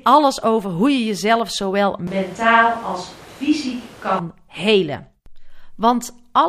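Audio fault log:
2.07 to 4.19 s, switch to a distant microphone: right after "hoe je jezelf zowel" the speech jumps into a roomy, hollow sound with thinner bass, drops about 5 dB, and room noise rises to around 25 dB under the speech, likely because the close mic dropped out and a farther one took over, then it snaps back.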